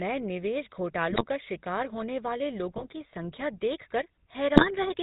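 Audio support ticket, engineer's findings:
GSM full-rate codec, whole clip: buzzy, gravelly speech, nothing above 4 kHz. Plainly audible. Points to the 13 kbps GSM full-rate coder: vocal-tract filter driven by a sparse regular pulse excitation that keeps only every third sample, leaving a coarse, rough timbre.

GSM bit errors, at 1.10–1.22 s, 2.76–2.85 s (just before "की संख्या") and 4.54–4.68 s: short squawks, pops and gargling, roughly a few 20 ms frames each. Corrupted filter, pitch or gain parameters reaching the decoder distort the spectrum or spike the level for those frames.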